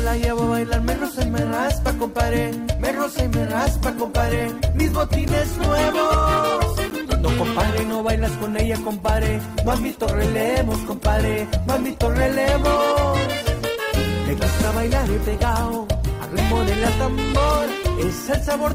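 Adaptive stream at a lower bitrate, from 3.58 s to the end of the clip: the player switched to a lower-quality version of the stream, most plausibly because the connection slowed, and never switched back. The change is abrupt, with no gap. Coding artefacts rise. That degree of loss fits a fall from an Opus stream near 64 kbit/s to one near 16 kbit/s.

Block of digital silence, at 5.28 s and again at 6.90 s, each 10 ms long: a short run of samples was replaced by zeros, likely because the output buffer was not filled in time. The signal drops straight to nothing and returns without any fade, so each edge is a hard discontinuity. At this length each one is heard as a tick or dip on top of the already degraded sound.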